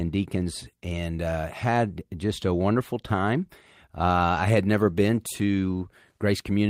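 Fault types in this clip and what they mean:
No faults detected: no dropouts, clicks, distortion or level anomalies at any point in the audio.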